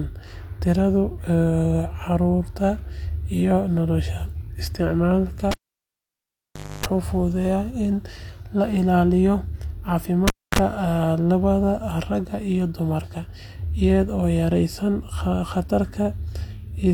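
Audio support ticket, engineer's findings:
Cable pulled and plugged in, twice: 5.51–6.86 s and 10.28–10.59 s. Pop, dropout (1.3 s, 0.26 s), 50 Hz mains buzz as the tip makes first contact, second pop on reseat. Suspect connector or lead.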